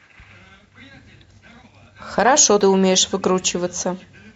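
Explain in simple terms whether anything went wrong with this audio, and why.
A brief glitch interrupts the speech at about 2.61 s. It comes from damaged data in a compressed stream: part of the file was corrupted, so the decoder misread that spot, lost its place, and had to find the next good frame.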